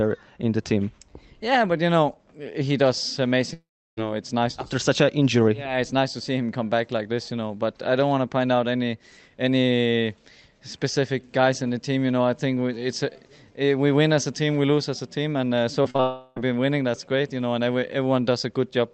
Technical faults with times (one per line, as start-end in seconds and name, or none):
3.53-3.99 long network dropout
15.83-16.00 short concealed packet loss
16.00-16.38 long network dropout